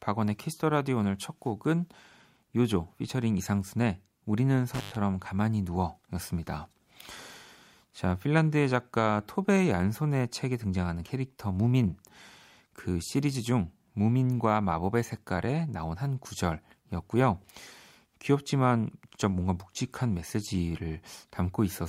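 At 4.74 to 4.96 s the speech breaks up with an intermittent contact, a loose plug or cable briefly losing connection. The signal drops out for about 105 ms, leaving faint hiss between crackling edges. On a waveform this shows as a near-flat gap bracketed by sharp spikes.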